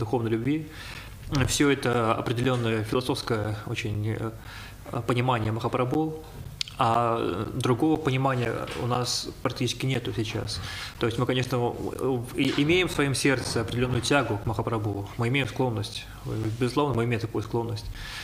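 Regular ticks or pops recur every 0.5 s from 0.44 s to 17.95 s, about forty in all, each a gap of roughly 10 ms filled with silence. These are periodic USB or driver dropouts, where a background task stalls the audio path at a fixed interval.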